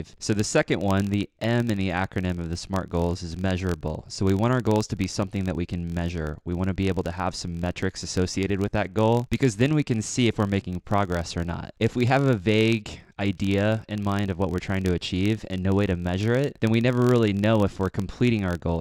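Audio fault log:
Throughout, filter restarted on every block: a steady buzz at about 43.1 Hz runs under the speech, a fine regular ticking that grows louder in stronger passages and fades in quiet ones. The filter loses its stored state at each block boundary and starts again from silence, so every block opens with a small transient. At this repeat rate the ticks fuse into a low buzz, which fits a 1024-sample block, and they scale with the signal's level.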